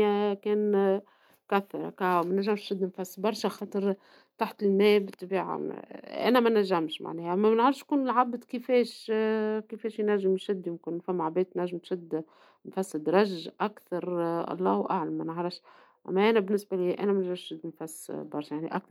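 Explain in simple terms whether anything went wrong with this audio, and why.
Nothing went wrong with this recording: the speech comes through steadily, with no technical faults to be heard anywhere in it.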